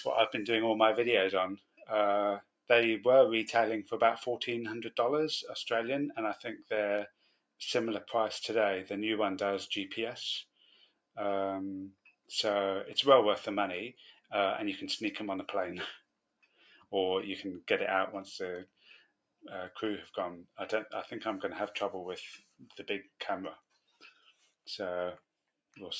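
A noise suppressor built for speech was left on this audio and treats steady tones, ambience and decays as noise. The level keeps swinging by around 5 dB throughout, so the sound pumps, flutters or thins out. The sound cut by the noise suppressor drops hardest at 1.57–2.7, 6.57–7.6, 10.45–11.17, 11.93–12.3, 14.14–14.32, 15.98–16.92, 18.66–19.44 and 22.39–25.75 s. In each span the suppressor took the material for noise and pulled it down by about 15 to 19 dB for somewhere between 0.15 and half a second in total, and about one and a half seconds across the last span. The call microphone processing shows in nothing being present above 8 kHz.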